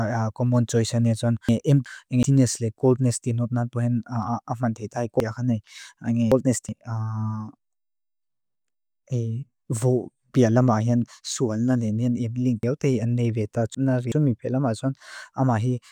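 Chunks out of order at 1.49–2.23 s, 5.20–6.69 s and 12.63–14.12 s: a 0.37 s block of speech plays one chunk late in the first span and three chunks late in the others, so the speech briefly jumbles, with three hard joins in each span.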